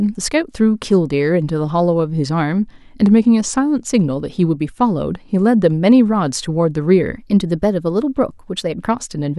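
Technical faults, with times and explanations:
3.03–3.84 s and 7.18–8.88 s, drift correction step: clock-matching software likely changed the playback rate in single jumps to rebalance its buffer. The speech first slows about 5.8% and drops roughly a semitone (about 103 cents), then later runs about 5.8% fast and rises roughly a semitone (about 97 cents).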